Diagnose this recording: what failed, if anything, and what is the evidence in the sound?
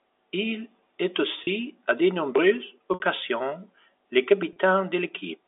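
Network stage: packet loss with pitch repetition at 1.44–1.47, 2.94–3.00 and 4.53–4.56 s. The receiver loops the last pitch period, so the short gaps sound briefly held and buzzy and the 60 ms one fades into silence, rather than clicking as a buffer underrun would.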